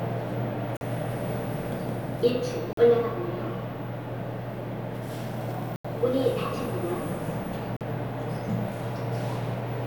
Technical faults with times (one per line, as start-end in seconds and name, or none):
0.77-0.81 block of digital silence
2.73-2.77 block of digital silence
5.76-5.85 block of digital silence
7.77-7.81 block of digital silence